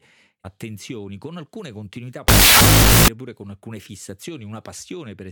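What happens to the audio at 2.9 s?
At 2.9 s you're inside a wrong sample width stretch (2.28 to 3.08 s): 16-bit data read as unsigned 8-bit, so harsh noise buries the speech, playing at half speed and an octave down.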